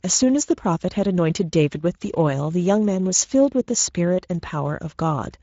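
From start to finish the speech sounds grainy and hoarse, and nothing is heard above about 7.7 kHz. This is Speex codec damage, plainly audible. The CELP encoder has too few bits to model the excitation cleanly, so noise is left in the voice. The level of damage fits a wideband setting near 16.8 kbps.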